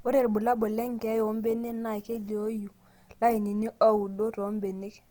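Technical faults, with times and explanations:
Throughout, Opus compression: likely a bit-starved Opus encoder in music mode, consistent with about 24 kbps, noise-filling bands, so the speech sounds grainy and rough up to 20.3 kHz.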